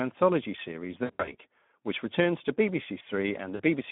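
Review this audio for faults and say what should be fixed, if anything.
Speex codec throughout: speech sounds hoarse and gritty within 200 Hz to 3.5 kHz, fitting about 11 kbps. The grit, not just the narrow band, sets it apart from plain band-limiting. Raise the bitrate or switch codec.

VoIP packet loss concealed by the speech codec at 1.04–1.35 s (160 ms lost across 240 ms) and 3.55–3.62 s. The decoder stretches the last sound into a fading buzz or noise rather than a click or silent gap. Add forward error correction and jitter buffering.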